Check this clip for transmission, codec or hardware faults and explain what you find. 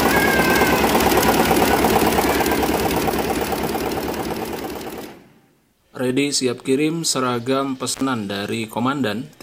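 One hardware fault is present: an intermittent contact between 7.92 and 8.04 s. A loose plug or cable briefly loses its connection, dropping the signal for about 70 ms and crackling as the contact breaks and remakes. On a waveform this shows as a short near-flat gap framed by sharp spikes. A spectrogram shows vertical broadband streaks at each edge with only faint hiss between.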